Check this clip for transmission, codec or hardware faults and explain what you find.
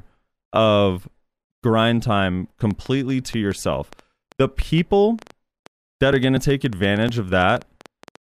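Two hardware faults are audible, and they overlap near the end.

A train of clicks runs from 2.71 to 8.17 s: around thirty pulses, about six per second at uneven spacing, as loud as the speech and ticking through pauses. The likely cause is interference.

Periodic USB or driver dropouts occur from 6.13 to 8.05 s, every 0.24 s. A blocked bus skips roughly 10 ms each time, giving regular ticks that sound only over the speech.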